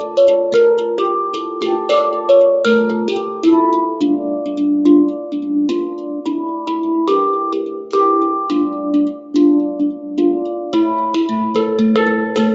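A noise suppressor built for speech was left running on this sound for the whole clip, treating steady tones, ambience and decaying tails as noise to be pulled down. Onsets get through while sustained parts sink, so the level swings by roughly 10 dB and the sound pumps and thins rather than holding an even body. The call path carries audio up to about 8 kHz.

At seven points the noise suppressor turned sound down, misreading held or fading material as noise and ducking it harder than its surroundings: 1.35 to 1.89 s (about 6 dB down), 3.11 to 3.45 s (about 5 dB), 5.14 to 5.30 s (about 4 dB), 5.90 to 6.68 s (about 7 dB, the longest), 7.63 to 7.92 s (about 5 dB), 9.15 to 9.34 s (about 7 dB) and 9.93 to 10.14 s (about 5 dB). Each is heard as a sag in level or a tail clipped short.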